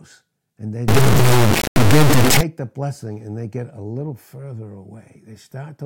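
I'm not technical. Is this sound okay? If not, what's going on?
No, it isn't. From 0.88 to 2.41 s, just after "and they" and until "the blessing and they", there's a fault called integer read as float. The audio was stored as whole numbers but played back as if they were decimal numbers, which fits 32-bit samples being misread this way. The values come out wildly wrong, so the sound slams between silence and maximum level, giving a harsh, extremely loud buzz that cuts out in the quietest moments.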